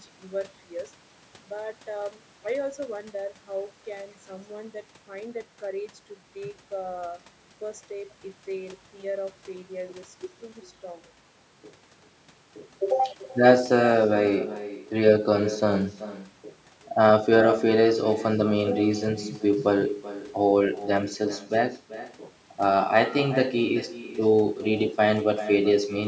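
Throughout, an echo with no canceller returns each phrase roughly four-tenths of a second later, about 15 dB quieter; spectrograms show faint, smeared duplicate harmonics trailing every syllable, below an 8 kHz top.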